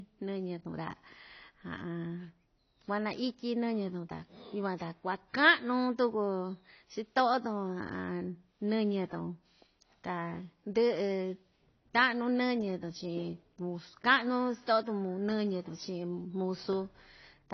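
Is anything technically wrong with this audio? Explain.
Yes, it's AAC compression throughout, likely AAC-LC at a low bitrate, which fits something around 24 kbps. Nothing survives above about 6.6 kHz, so the speech sounds dull, and thinly coded bands leave an audible fizzy, warbling smear on sibilants and held sounds.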